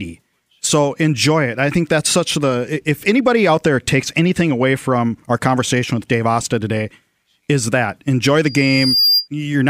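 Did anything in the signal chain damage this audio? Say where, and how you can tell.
Yes. In the analogue acoustic path, the microphone picked up its own loudspeaker and the loop gain passed one at 4.8 kHz, causing loudspeaker feedback squeal. Just after "is that enjoy", from 8.45 to 9.28 s, a pure tone swells over about half a second to roughly 5 dB above the speech.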